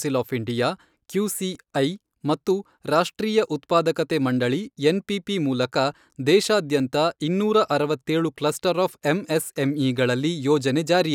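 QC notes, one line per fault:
1.55 s and 6.80 s, block of digital silence: the speech drops to silence for about 1.3 ms, then about 0.7 ms (fitting 64- and 32-sample buffers), with no fade, so each is a tick. The waveform shows a flat gap; the spectrogram, a thin full-band vertical line.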